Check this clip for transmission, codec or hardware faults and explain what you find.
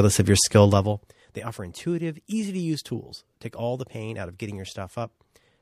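There is one fault, zipper noise, between 0.67 and 1.17 s. During that half second the level drops by roughly 15 dB. The drop happens in coarse 2 dB steps, about twenty per second, with no smoothing between them. Each jump puts a small discontinuity in the waveform, and each one clicks. Strung together, the clicks form a fast ticking or zipping that rides on the speech while the level falls.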